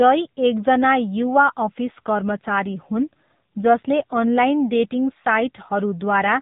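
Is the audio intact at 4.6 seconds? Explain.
No. The AMR narrowband mobile codec runs through the whole clip, including 4.6 s: nothing above 4 kHz survives, and the plainly buzzy, synthetic speech fits a low bitrate around 7.4 kbps.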